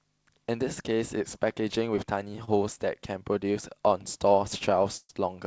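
Short stalls from late packets occur at 2.45 to 2.49 s and 4.59 to 4.63 s. Each time, the next packet had not arrived when it was due, so the jitter buffer ran dry and the receiver stretched the last bit of sound to cover the wait, 26 ms the first time and 21 ms the second. Nothing is lost. The audio picks up exactly where it left off, so all you hear is a slightly drawn-out sound with a slight buzz or dip.

A call audio freeze follows at 4.97 to 5.11 s. The sound holds and then fades as a buzz or hiss, ending in 40 ms of silence, with 122 ms of filler in all before the speech resumes from the point where it stopped. This is likely a longer hold-up of packets on the network. Nothing is cut, but a gap has been inserted. Throughout the call path, there is no content above 8 kHz, which fits a wideband call codec.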